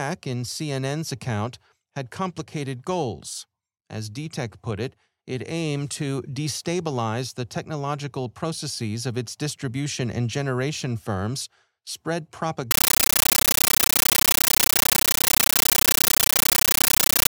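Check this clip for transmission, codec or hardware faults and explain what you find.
There's one fault, and you can't miss it. From 12.71 s to the end, it's a compressed stream played as audio: AC-3 data taken as plain samples, undecoded. Each frame becomes a 13.3 ms noise burst then zero padding, 31.25 times a second, so loud chattering static replaces the speech.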